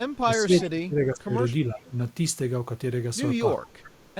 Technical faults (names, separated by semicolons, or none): speech suppressed in double talk; echo leak